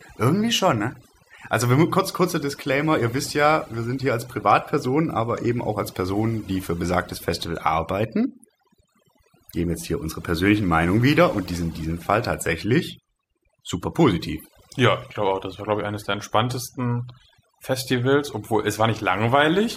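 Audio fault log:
throughout, overdone noise removal: the gaps between phrases have sunk and are sprinkled with twinkling specks. Noise reduction set too strong cuts individual frequency bands whenever they sit near its noise estimate, taking the quieter parts of the voice along with the noise.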